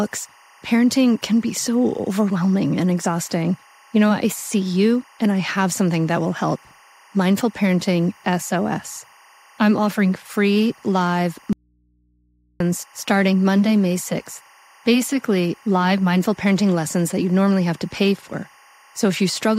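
A steady chirping warble sits behind the speech throughout, roughly 30 dB down, alternating near 1 and 2 kHz: timecode bleed from 24-frame linear timecode leaking in. At 11.53 s, just after "I'm offering free live", the speech cuts abruptly to faint hum, roughly 45 dB down, until 12.60 s, likely an audio dropout to a faint residue, with the input left live.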